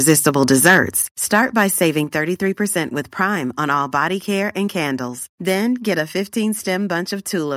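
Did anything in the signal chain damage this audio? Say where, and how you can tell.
Yes. Microphone overload occurs from 0.09 to 0.79 s and again from 1.34 to 1.63 s. The loudest syllables turn harsh and crackly as their peaks flatten, at about 7 dB and then about 2 dB past full scale. The cause is likely excessive input gain driving the converter into its limit.

The microphone volume is stepped down at 1.02 s. Voice and background together fall by 5 dB in one step, right after the first distorted stretch. This points to call processing that likely detected clipping and lowered the device's input volume.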